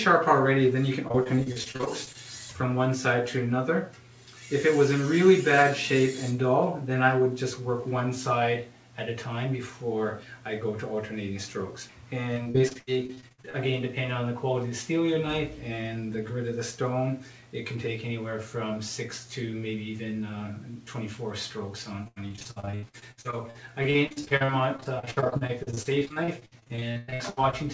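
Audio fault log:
1.08–2.16 s, 12.34–13.56 s, 22.04–27.55 s: repeated packet loss (robotic sound). Holes of up to 38, 79 and 103 ms are filled by stretching the last sound, covering roughly a quarter to a third of each stretch. This gives choppy stutter with pieces missing, and the spectrogram shows repeated frozen slices below the 8 kHz ceiling.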